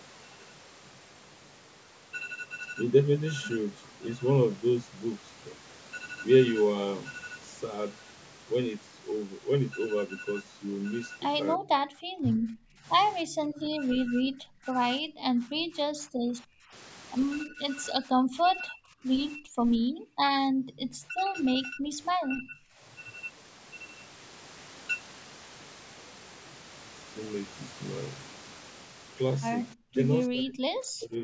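From 11.55 to 16.74 s, 17.44 to 20.27 s, 21.08 to 22.58 s and 29.74 s to the end, speech is suppressed in double talk. With both sides talking at once, the echo canceller likely mistook the near talker for loudspeaker echo, so the voice dips deeply, by up to around 30 dB, or breaks off in pieces. From 20.55 to 20.8 s, the background is gated by the echo canceller while the loudspeaker plays, and the room sound briefly drops by about 39 dB before returning. Throughout, the call microphone processing limits the audio to nothing above 8 kHz.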